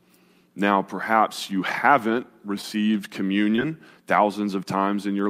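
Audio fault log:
3.56–3.60 s, short concealed packet loss: about 20 ms of the speech stream arrived too late for the decoder, and the receiver concealed the gap by extending the sound just before it for about 18 ms, either as a pitch-based continuation if that sound was voiced or as shaped noise if it was not, before cross-fading back into the real signal. The result is a brief smear or wobble lasting a few hundredths of a second.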